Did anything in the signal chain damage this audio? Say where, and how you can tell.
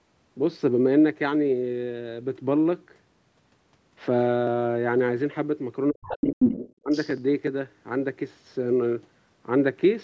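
Yes. The damage is in the call processing stage, specifically the echo canceller, and it is concentrated between 5.9 and 7.17 s.

Speech suppressed in double talk: from 5.9 to 6.38 s the talker's level falls away sharply, by something like 40 dB at its deepest, across roughly 400 ms. It drops again from 6.8 to 6.93 s, by around 30 dB. Both dips line up with a second voice arriving. The likely cause is the canceller's suppressor failing to tell near-end speech from loudspeaker echo and attenuating both together.

Other side's voice leaking through: a second voice is audible from 6.07 to 6.73 s at roughly the same level as the talker. It returns from 6.9 to 7.17 s, well down, about 20 dB below. This is likely residual echo: the far end played on the loudspeaker was picked up by the microphone, and the canceller's adaptive filter did not fully subtract it.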